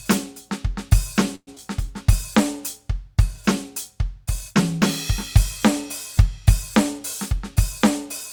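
Music, with two closely spaced network faults. At 1.35 s a call audio freeze begins: the last sound is stretched into a fading buzz or hiss for about 117 ms, then drops to silence before the music resumes at 1.49 s. Nothing is lost, only delayed, likely because packets stalled and the jitter buffer ran dry. At 1.55 s comes a skip ahead, the opposite case. A brief 14 ms bridge replaces roughly 70 ms of discarded music, and playback lands at 1.58 s with no pause, catching up about 50 ms of the delay the freeze had added.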